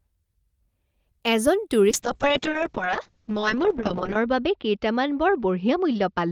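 Speech runs clean until 1.91 s, when a call bitrate drop sets in and lasts to the end. The top end collapses from 20 kHz to 8 kHz, and the sound turns muffled and rough for about 2.25 s at its worst. That fits an encoder starved from around 32 kbps to roughly 6 kbps after a bandwidth estimate fell.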